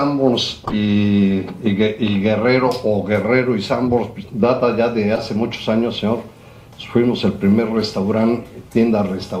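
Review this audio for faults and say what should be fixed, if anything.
Sharp chirps and noise bursts at 0.65 to 0.73 s (loudest, near -5 dBFS), 3.89 s and 5.15 to 5.19 s: corrupt frames decoded, where flipped bits put energy at wrong frequencies. Add checksum or CRC checks so damaged frames are concealed or dropped, not decoded.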